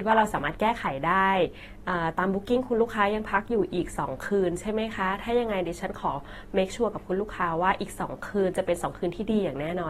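From start to finish the speech is dull and smeared, with a warbling, fizzy texture on sustained sounds and sibilants, and nothing is present above 16.6 kHz. This is likely AAC compression: AAC-LC quantises each frame's spectrum against a hearing model, and when bits are scarce it drops the top band and leaves gaps or noise-filled regions, which fits a low bitrate around 32 kbps. The damage is plainly audible throughout.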